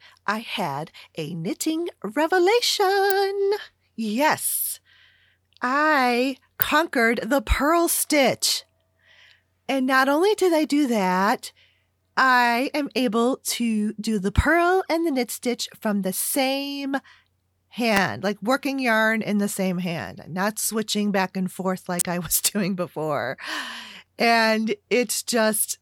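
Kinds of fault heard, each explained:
Electrical switching spike: a sharp snap sitting on top of the speech, heard at 3.10, 6.62 and 17.97 s and from 21.99 to 22.01 s after "switching back and forth", each peaking around -5 dBFS, likely from a nearby switch or motor arcing into the audio line.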